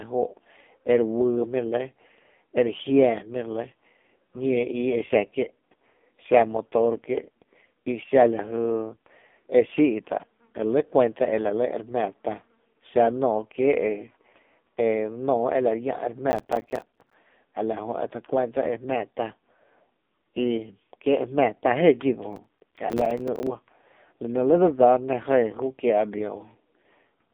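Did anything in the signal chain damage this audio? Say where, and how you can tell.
Yes. At the codec stage, the whole clip passed through the AMR narrowband mobile codec at 5.9 kbps. The speech sounds buzzy and synthetic. A spectrogram shows a hard ceiling at 3.6 kHz with nothing above it, and the band is thin below about 200 Hz.

At the driver or buffer stage, processor overload crackle tears through the speech from 16.31 to 17.14 s, between "ela llⱥ’ e re" and "a la", and again from 22.33 to 23.47 s. Dozens of roughly 5 ms buffers were missed and replaced with silence. The waveform shows rapid hard-edged dropouts to zero, and the spectrogram shows dense vertical broadband streaks.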